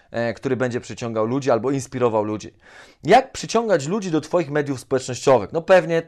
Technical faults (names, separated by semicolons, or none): none